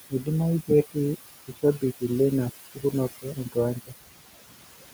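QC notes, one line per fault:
Throughout: overdone noise removal, with bands near the noise floor pushed down hard, leaving near-silent gaps with twinkling specks.
Throughout: noise suppressor artifacts. Steady noise is lowered by about 13 dB between phrases and returns under the speech, so the room noise pumps.
3.11–3.56 s and 3.86–4.94 s: speech cut by the noise suppressor. Quiet speech was taken for noise and pulled down by up to about 18 and 19 dB. Roughly a tenth of a second is lost in the first span and most of the second, so the cut speech sounds swallowed and faint.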